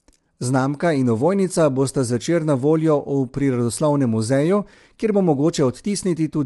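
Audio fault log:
Throughout: low-delay AAC compression, likely at a low bitrate, with plainly audible roughness and graininess. A spectrogram shows noise between the harmonics and nothing above 11.6 kHz.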